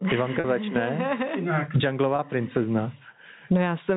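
Throughout the speech there is gain pumping, with the level swinging by around 20 dB. The likely cause is input gain set far too high, with a fast limiter clamping every peak.

At 0.40 s there is packet loss with pitch repetition. About 40 ms of audio is missing, which fits four lost 10 ms packets. The receiver bridges the gap by repeating the last pitch period, giving a brief held, buzzy tone.

At 2.16 s a second loss of about 30 ms, consistent with three packets, is concealed the same way. It produces a shorter buzzy hold before the speech resumes through the 4 kHz-limited telephone band of the G.711 path.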